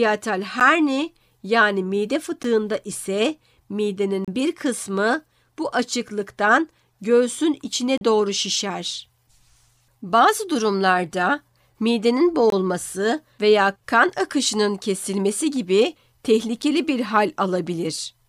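The speech drops to digital silence six times. Short holes fall at 0.60 s, 2.43 s and 16.62 s, about 8 to 11 ms each. Longer ones run from 4.25 to 4.28 s, 7.98 to 8.01 s, and 12.50 to 12.52 s. Each is a block of digital silence: the output buffer likely went unfilled, so samples became zeros. The short gaps sound like ticks, the longer ones like brief holes. Two gap lengths fit 512-sample and 1024-sample buffers.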